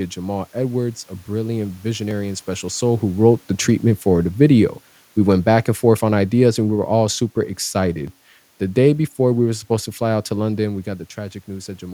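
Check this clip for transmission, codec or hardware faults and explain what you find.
Two faults are present in this speech clip: regular clicks from clock drift buffer slips, and a gradual drop from automatic gain falling.

From 2.11 s, just after "a brilliant", to 11.06 s, four brief clicks recur every 2.99 s. These are likely clock drift buffer slips: two clocks disagreeing by a couple of hundred parts per million force a buffer to drop or repeat a few dozen samples on each cycle.

From 3.2 s to 7.15 s, the speech and its room noise sink together by about 4 dB. This is automatic gain falling: the gain control judged the input too loud, or its background noise too strong, and eased its gain down. The level changes near 2.5 s and 10.5 s come from the talker moving relative to the microphone, not from the system.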